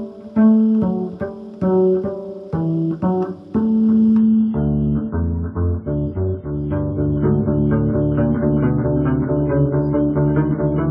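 The audio switches to an adaptive stream at a lower bitrate from 4.18 s to the end: the quality drops suddenly, with no gap, as the player falls back to a lighter version of the stream after the connection slowed. The sound fits a change from about 128 kbit/s MP3 to roughly 15 kbit/s. Codec artefacts rise and nothing remains above 5 kHz. On a spectrogram, the upper band stops abruptly at 4.18 s, leaving a flat ceiling at 5 kHz, while the waveform continues unbroken.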